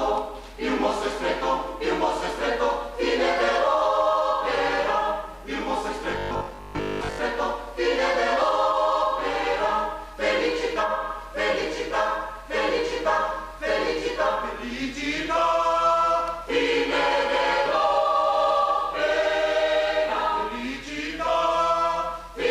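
From 6.11 to 7.21 s the audio turns into a rigid, metallic buzz at 50 Hz, robotic sound from repeated short buffers. The likely cause is audio arriving too seldom, so the software loops the last 20 ms chunk and skips the real material for most of that stretch. A waveform shows identical 20 ms segments repeating back to back, and a spectrogram shows evenly spaced horizontal harmonic lines 50 Hz apart.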